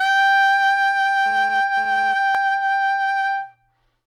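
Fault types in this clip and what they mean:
GSM phone buzz: a hard, raspy buzz with a dense stack of harmonics cuts into the music from about 1.26 s to 2.14 s, sitting roughly 22 dB below it and unrelated to anything being played. Its fundamental is 217 Hz, the burst rate of a nearby 2G phone; the audio circuitry rectifies those radio pulses into sound. Here the phone is passing data rather than holding a call, so the buzz arrives as a stretch that starts and stops instead of running continuously.
Overlap between stream segments: a single click or tiny skip at about 2.35 s, where the waveform jumps because a few milliseconds of music have vanished. Two consecutive stream segments carried time stamps that overlapped, and the player trimmed the overlapping portion even though that stretch of sound was not actually duplicated, so real audio was discarded. The segments appear to be 6 s long, so the fault falls at a segment boundary and occurs just once within this short clip.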